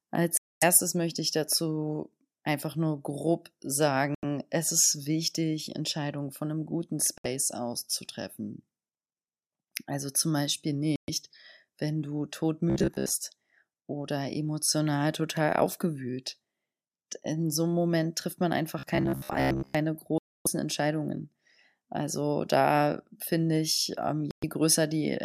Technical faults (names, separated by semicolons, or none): Bluetooth stall; robotic sound from repeated short buffers